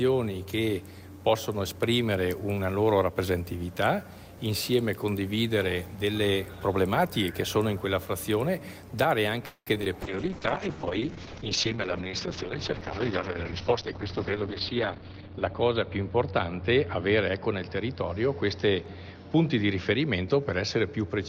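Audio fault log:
9.45–9.69 s, call audio freeze: the sound stretches into a fading buzz with about 60 ms of near-silence, a 0.21 s hold likely caused by packets stalling and the jitter buffer running dry.
9.75–9.78, 9.82–9.84 and 9.84–9.88 s, short concealed packet loss: three quick smears or wobbles where 20–40 ms chunks went missing and the receiver patched them by extending the preceding sound.
10.02 s to the end, call bitrate drop: the encoder falls from 48 to 7 kbps and the top end narrows from 20 kHz to 6 kHz, so everything turns muffled and grainy, bottoming out for about 4.8 s.
10.26–11.14 s, jitter buffer slow-down: the receiver repeats tiny slices to add 57 ms, so playback runs at 94% speed with the same pitch, sounding slightly drawn out.
13.31–15.63 s, jitter buffer speed-up: short pieces totalling about a fifth of a second get trimmed to shed delay, so the audio runs at 109% speed and feels hurried.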